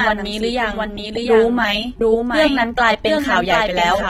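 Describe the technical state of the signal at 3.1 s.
At 3.1 s, as across the whole clip, a doubled audio track is heard: a second full-band copy trails about 0.7 s behind, around 5 dB quieter, likely from a slower duplicate capture path.

AAC compression is also plainly audible at that moment. Nothing sits above 16.6 kHz, and coarse quantisation leaves the speech dull and smeared with a warbling, fizzy edge, which fits roughly 32 kbps AAC-LC.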